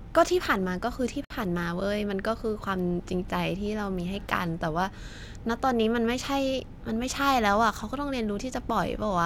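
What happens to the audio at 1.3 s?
At 1.25 s the speech stops dead and a silence of about 57 ms opens, ending at 1.30 s. This is a gap at a join of encoded pieces: two separately encoded segments were spliced without trimming, so one encoder's start-up delay and the other's padded last frame remain as dead air. The edges are abrupt but smeared by the codec. Unlike a dropout, no sound is lost; the speech resumes exactly where it stopped.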